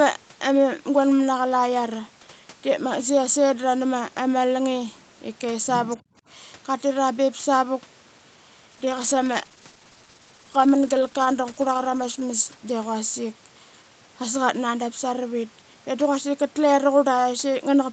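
From 5.89 to 5.97 s a faint second voice, about 20 dB below the speech, is heard; it is likely the other side's voice leaking through past the echo canceller. From 6.02 to 6.24 s the background is gated by the echo canceller, pulling room sound down by about 27 dB for roughly a fifth of a second before it returns. From 8.72 to 13.09 s a call bitrate drop takes Opus from 32 to 14 kbps, lowest for about 3.6 s, leaving the speech rougher and more watery until the rate recovers.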